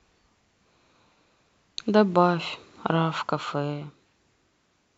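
No technical faults can be heard anywhere in the speech.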